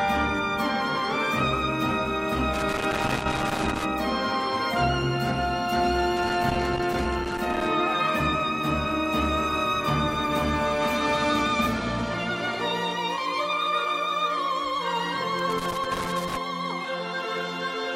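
Loose connector crackle breaks up the sound three times, from 2.54 to 3.86 s, 6.17 to 7.67 s and 15.39 to 16.37 s, as a worn contact chops the signal. On a waveform these show as jagged dropouts and spikes, and on a spectrogram as broadband vertical streaks.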